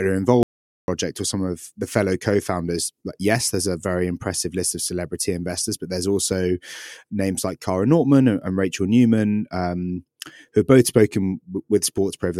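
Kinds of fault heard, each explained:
Audio dropout to silence: the speech cuts out abruptly at 0.43 s and returns at 0.88 s, leaving about 450 ms of silence with no room tone beneath it, after which the audio resumes mid-flow on "or some of the". The likely cause is a momentary loss of the input, such as a disconnect or stray mute, while recording continued writing zeros. On a waveform this is a flat line; a spectrogram shows a clean black vertical band across all frequencies.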